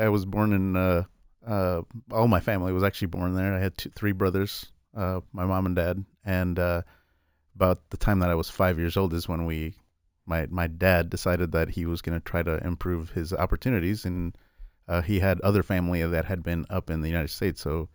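A bright, metallic fizz rides on the speech from start to finish, swelling and fading with the level of the talking. Its lowest band lies between 8 kHz and 16 kHz, about 23 dB below the speech, and moves in the opposite direction to the pitch. This is imaging from sample-and-hold upsampling. The rate was raised by repeating each sample with no smoothing filter, so mirrored copies of the spectrum sit above the original band, which fits a step from 16 kHz to 48 kHz.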